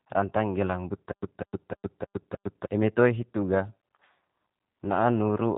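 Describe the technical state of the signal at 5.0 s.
At 5.0 s the speech is still passing through the G.729 codec, which is applied across the entire clip rather than at this moment alone. The speech is rebuilt from a vocal tract filter, a pitch predictor and a few pulses per frame, so it sounds plainly rough and synthetic. Nothing above 3.8 kHz survives, and the buzzy, coarse texture fits an 8 kbit/s G.729A encoding.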